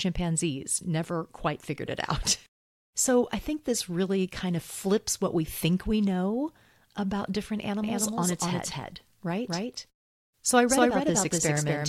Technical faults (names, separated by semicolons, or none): doubled audio track